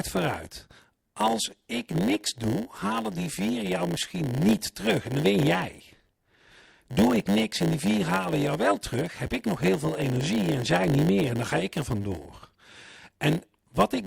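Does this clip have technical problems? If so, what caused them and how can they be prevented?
Yes. A block size mismatch (padded) runs throughout this speech: one stage writes blocks shorter than the next reads, zero-filling the remainder. The gaps produce a 100 Hz buzz and slow playback to 0.919 times normal speed. Matching block sizes or buffering between stages prevents it.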